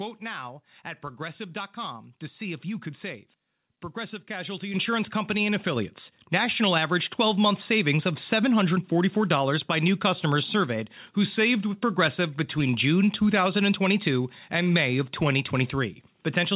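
At 4.74 s and again at 5.76 s the microphone volume is stepped up, by about 8 dB and then about 4 dB, as the call software raises the input gain. Voice and background jump louder together, with the band-limited call sound topping out near 4 kHz.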